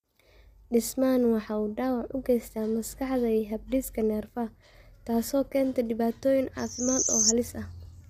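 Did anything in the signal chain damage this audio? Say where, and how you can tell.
Yes. Throughout, the speech sounds rough and grainy, with noise between harmonics, most likely low-delay AAC compression at the codec stage, consistent with roughly 32 kbps.

A loudspeaker feedback squeal follows "taas oo keenta dhibaatooyin": a 6.1 kHz tone swells over about half a second, from 6.58 to 7.33 s, to about 10 dB above the speech.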